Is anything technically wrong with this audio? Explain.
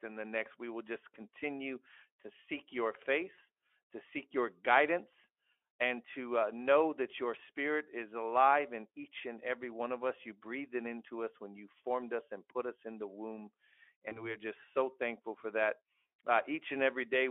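Yes. There are two short dropouts from VoIP packet loss concealed by the speech codec, at 3.35 to 3.38 s, between "continue to seek your" and "to seek your guidance", and at 14.09 to 14.36 s, between "us in the womb" and "just so thankful for". Each gap fits a single lost 20 ms frame. The decoder filled it by extending its last pitch and filter while lowering the gain. At 3.35 s this gives a brief stretched sound that fades. At 14.09 s the frames that follow keep building on that guess, so the sound stays thin and coloured for about a quarter second. On a spectrogram, the harmonics turn flat and repetitive and then fade. On the waveform, the amplitude dips and the cycles look unnaturally regular.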